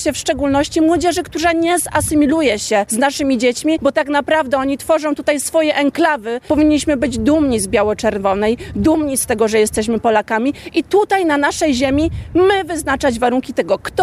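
Nothing stood out as a technical fault on listening to the clip.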